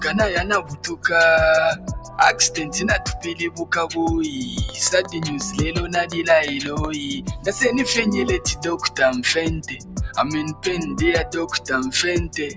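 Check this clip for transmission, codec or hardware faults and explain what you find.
A speech-tuned noise suppressor is running on non-speech audio throughout, and it also causes six distinct level dips.

Noise suppressor applied to music or sounds: steady content is mistaken for noise, so gain swings by roughly 15 dB. This sounds like pumping, and a waveform shows a fluttering envelope.

Sound cut by the noise suppressor: at 0.62–1.04 s (about 13 dB), 1.75–2.18 s (about 9 dB), 3.18–3.34 s (about 8 dB), 3.5–3.66 s (about 13 dB), 7.21–7.47 s (about 10 dB) and 9.65–9.99 s (about 12 dB), sustained or decaying sound is pulled down, so tails are truncated. A spectrogram shows these as dark vertical gaps, with the call processing's band-limiting leaving nothing above 8 kHz.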